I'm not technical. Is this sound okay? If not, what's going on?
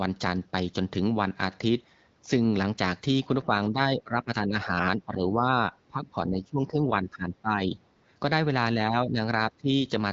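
No. While both sides talked at once, the echo canceller likely mistook this talker for echo and turned the speech down. This is speech suppressed in double talk. The speech dips and fades at 3.44 to 3.55 s, 3.71 to 5.46 s, 5.88 to 7.77 s and 8.76 to 9.7 s, most deeply in the 5.88 to 7.77 s stretch.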